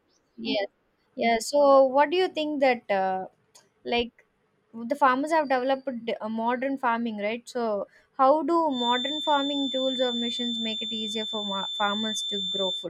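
From 8.68 s to the end of the clip at 12.89 s, a feedback whistle sits behind the speech. It is a thin, steady tone near 3.5 kHz. It stays only a few decibels below the speech. Its level swells and fades slowly but never builds. The likely cause is a loudspeaker-to-microphone loop held right at the edge of feedback. One frequency keeps ringing without running away.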